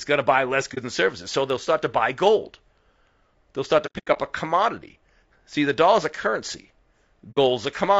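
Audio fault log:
throughout low-delay AAC compression. The speech sounds rough and grainy, with noise between harmonics, which likely points to AAC-ELD near 32 kbps and its short frames.
0.74–0.78 s, 3.86–4.18 s, 7.31–7.38 s AAC frame loss with muting. Lost frames were decoded as silence, leaving brief dips and soft-edged holes. The middle stretch holds several gaps, the longest about a tenth of a second.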